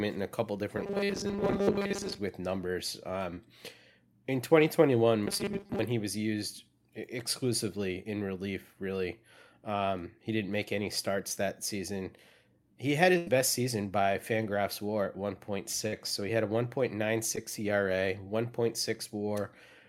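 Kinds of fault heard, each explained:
Robotic sound from repeated short buffers: The speech turns into a rigid, metallic buzz at a fixed 200 Hz, twice, ending just before "he was used" the second time. The likely cause is a 5 ms buffer replayed over and over while most of the real audio is skipped.
Short concealed packet loss: A tiny piece of audio failed to arrive in time. The receiver covered it by extending the sound before it. This leaves a brief smear after "with numbers" at 3.34 s, about 20 ms lost, and another at 17.36 s.
Burst of packet loss: Several packets' worth of speech never played. The receiver stretched the last sound and faded it out, then jumped ahead. About 90 ms vanishes at 13.18 s, and about 40 ms just before "so he had a".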